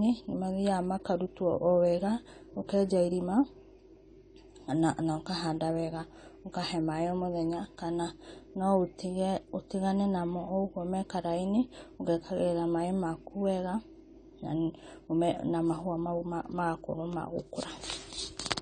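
Heavy AAC compression, likely from an AAC-LC encoder running at a low rate that fits about 32 kbps, shapes the speech for its whole length. Starved of bits, the encoder discards the upper spectrum entirely, leaving nothing above 9 kHz, and quantises the remaining bands coarsely against its hearing model. The damage is plainly audible: the speech sounds dull and smeared, with a warbling, fizzy texture on sustained sounds and sibilants.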